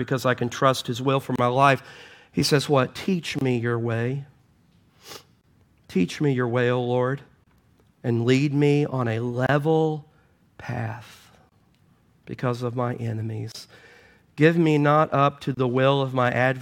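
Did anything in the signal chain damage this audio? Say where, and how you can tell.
Yes, a gap at a join of encoded pieces recurs every 2.0 s in this speech: 1.36, 3.39, 5.41, 7.44, 9.47, 11.49, 13.52 and 15.55 s, each about 27 ms (the first 30 ms). The segments were likely encoded separately and concatenated untrimmed, leaving encoder delay and last-frame padding as silence. The waveform shows flat dropouts with slightly smeared edges, and the spectrogram shows narrow blank vertical stripes.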